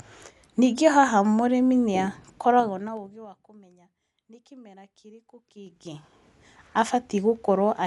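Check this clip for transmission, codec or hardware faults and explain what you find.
Two faults are present: a dull, band-limited codec sound across the whole speech clip, and stepped zipper noise during two level changes.

Throughout, the speech sounds dull, with nothing above about 11.4 kHz and a rough, fluttering noise around tonal parts. This is likely Dolby Digital compression at a low bitrate, around 64 kbps. The encoder narrows the band and leaves many frequency lines without mantissa bits, so the decoder fills them with dither noise.

From 2.51 to 3.44 s the level drops by roughly 25 dB, and from 5.48 to 6.22 s it rises by about the same amount. Both moves carry a ticking, zipping texture of about ten clicks per second. This is zipper noise: the gain moves in 3 dB jumps with no smoothing, and each jump puts a small click into the waveform.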